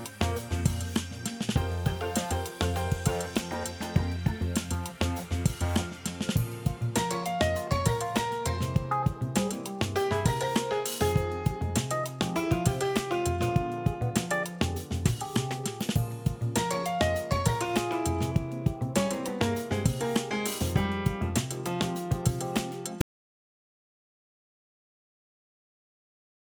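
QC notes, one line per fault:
23.01 s to end: audio dropout to silence. The sound cuts off abruptly mid-flow and stays silent, with no room tone or noise floor, so it is not a fade or noise gate. The likely cause is lost input while recording continued.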